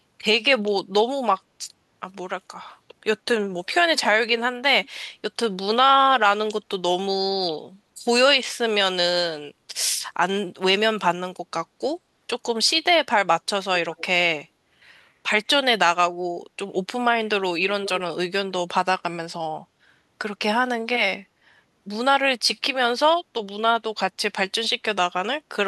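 Echo leak at 4.84–4.89 s, 13.96–14.06 s and 17.83–17.95 s: short, faint copies of the speech trailing it by 160, 171 and 155 ms, the last clearly louder, likely loudspeaker pickup the far end's canceller missed. Spectrograms show weak, time-shifted duplicates.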